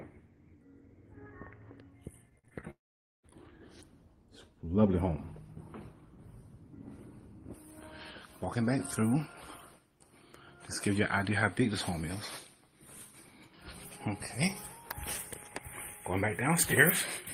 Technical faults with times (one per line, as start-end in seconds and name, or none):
2.29-2.64 repeated packet loss (robotic sound)
2.70-3.25 long network dropout
7.54-17.34 pre-emphasis left on